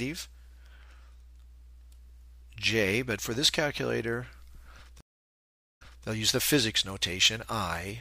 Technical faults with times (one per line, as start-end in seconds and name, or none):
5.00-6.07 stream reconnect